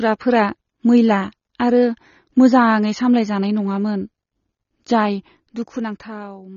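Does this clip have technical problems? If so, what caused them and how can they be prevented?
Yes. Throughout the speech, the audio sounds dull and smeared, with nothing above 6.9 kHz. Sibilants and sustained sounds have a warbling, fizzy texture. The likely cause is AAC compression at a low bitrate. The damage points to AAC-LC at around 24 kbps. At that rate, the encoder cuts the high band entirely. It also quantises the remaining frequency lines coarsely, leaving gaps that smear and warble. Encode at a higher bitrate, or keep an uncompressed master and compress only once.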